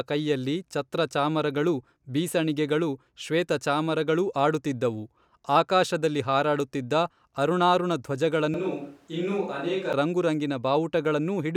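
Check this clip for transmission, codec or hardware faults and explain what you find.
One fault stands out in this speech. From 8.54 to 9.93 s it turns abruptly roomy, hollow and bass-light, about 5 dB quieter, with room noise near 35 dB below. This is likely a switch to a distant microphone. The added reverberation and noise, which a simple gain dip wouldn't bring, set it apart.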